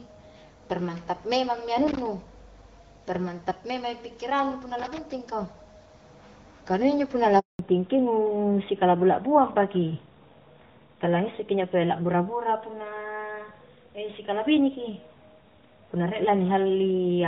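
At 1.87 to 2.07 s, right after "permantap memang mi", loose connector crackle appears: a worn contact making and breaking chops the signal into a brief, irregular scratchy burst. After "injo punna la", a handover gap at 7.39 s silences the speech for 200 ms while the call switches networks, and nothing spoken in that span survives. From 7.59 s to the end, a fallback to narrowband removes everything above 4 kHz. The speech turns duller and rougher than the wideband opening, which fits a drop from AMR-WB around 12.65 kbit/s to AMR-NB around 12.2 kbit/s.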